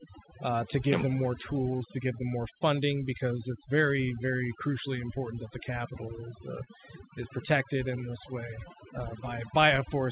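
Overdone noise removal runs through the whole recording. The suppressor was set too aggressively, pushing individual frequency bands down or off wherever they resembled its noise estimate. The background drops and breaks up into twinkling specks, and the quieter parts of the speech are stripped away.

Clock drift between sender and receiver is also present throughout. The sender's clock runs about 2% slower than the receiver's, so the jitter buffer keeps draining. The receiver has to compensate continually to keep playback fed, and small timing hiccups recur across the clip at uneven intervals.

Repeated timing corrections from 0.1 s to 9.8 s are how that drift is handled. The receiver repeatedly stretches short pieces, playing at roughly 98% speed and adding around 150 ms in total. Each edit is small and irregularly spaced.

A short stall from a late packet occurs between 6.64 s and 6.69 s. 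A packet missed its deadline and the buffer ran empty, so the receiver held the last sound for 25 ms, raising the delay by 25 ms. No audio is lost, but one sound is briefly prolonged with a slight buzz or dip. The G.711 mu-law call path caps the band at 4 kHz, which narrows the sound.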